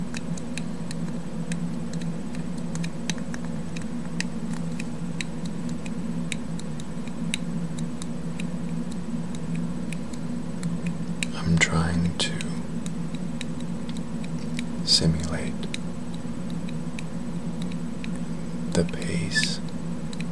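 Nothing stood out as a technical fault when listening to this audio.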